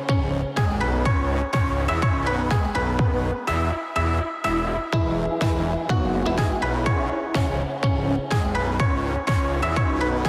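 No technical faults can be heard anywhere in the audio. Nothing in the sound calls for a time marker or a cause to be traced.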